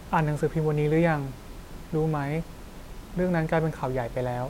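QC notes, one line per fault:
No faults are heard in this speech clip. A room noise sits in the background about 19 dB below the speech, part of the recording space rather than the system.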